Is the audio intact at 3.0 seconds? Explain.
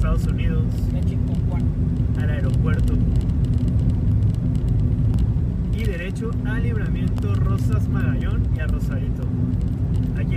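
Yes, the audio is intact at 3.0 seconds, with no fault audible at that moment.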